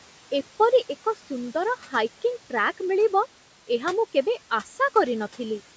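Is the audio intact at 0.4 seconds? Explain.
No. At 0.4 seconds the clip shows noise suppressor artifacts, and they run through the whole recording. The suppressor estimates the steady room noise, which sits about 20 dB below the speech. It then lowers the bands it judges to be noise, frame by frame, by about 12 dB. So the background dips between phrases and swells back under the speech.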